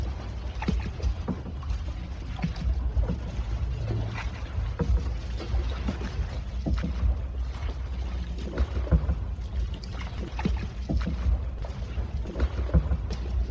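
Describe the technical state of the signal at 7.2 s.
At 7.2 s the signal is intact, with no dropout, click or distortion; it carries the ordinary character of a call path, with nothing above 8 kHz, consistent with a wideband codec such as G.722.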